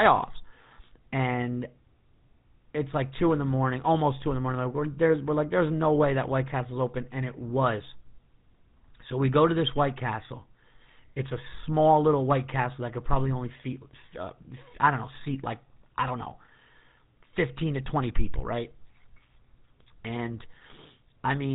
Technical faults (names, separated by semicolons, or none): GSM full-rate codec